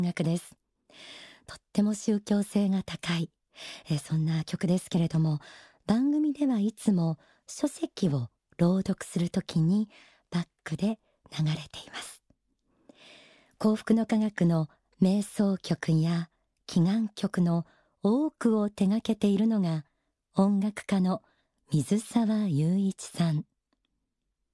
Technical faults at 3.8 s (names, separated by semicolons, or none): none